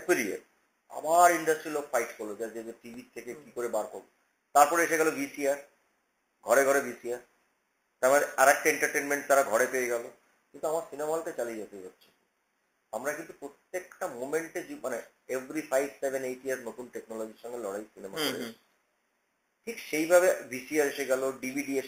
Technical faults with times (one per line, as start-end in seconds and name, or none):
2.94 repeated buffer